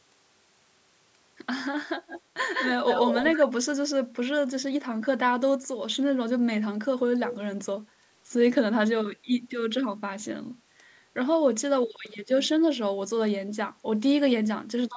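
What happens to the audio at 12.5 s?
Nothing goes wrong at 12.5 s: the speech carries on intact through that moment, with only the usual call microphone processing in the chain, which trims the lowest bass and leaves nothing above 8 kHz.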